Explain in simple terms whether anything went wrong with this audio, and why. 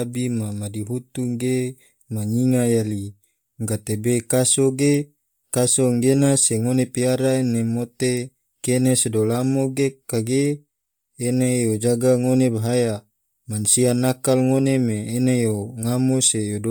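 Bluetooth LC3 compression, throughout: the speech has a heavy breathy, grainy edge, likely from the codec discarding upper detail and filling it with noise.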